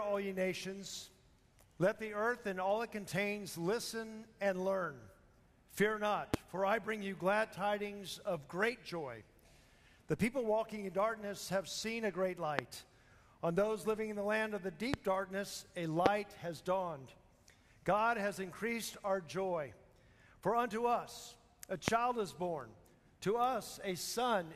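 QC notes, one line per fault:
6.34–6.36, 12.59–12.61, 14.94–14.96, 16.06–16.08, 21.88–21.90 s, loud pop: single sharp pops about 20 to 25 dB above the sound, which continues underneath, likely a brief voltage spike from a plug, switch or static.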